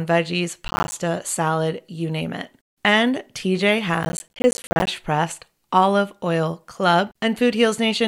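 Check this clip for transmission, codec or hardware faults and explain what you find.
Two bursts of processor overload crackle occur in this speech clip, from 0.68 to 0.93 s, just before "salad you name it", and from 4.03 to 4.87 s. The processor repeatedly missed its deadlines for small audio buffers, roughly 10 ms each. Every missed buffer left a short silent gap with hard edges. Strung together, these gaps give a gritty, tearing crackle over the speech. The second burst is longer, with several dozen dropouts.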